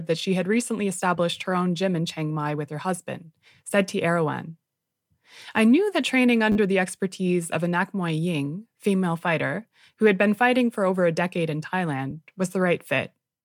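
A repeated buffer at 6.52 to 6.56 s, between "I knew that training" and "the expertise of a", comes from new audio not reaching the device in time, so it replayed the last short block four extra times. Each repeat joins hard to the next, giving a brief buzzy stutter that fits a 10 ms buffer. A second repeated buffer at 12.11 s, after "over a decade in", plays once extra and is heard as a single click. Nothing seems skipped afterwards.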